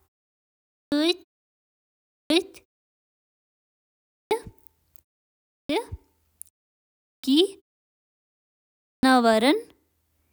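Speech bursts in abruptly with its opening sounds missing at 0.49, 1.91, 3.88, 5.30, 6.83 and 8.65 s, each time losing roughly 0.38 to 0.43 s. This is clipped start after a pause: the output device sleeps through silence and wakes too slowly.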